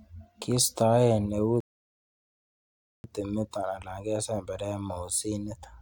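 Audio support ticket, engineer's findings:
Speech cuts to silence at 1.60 s, resumes at 3.04 s exactly where it stopped. Rebuffering stall: player buffer ran dry, about 1.4 s added, no audio lost.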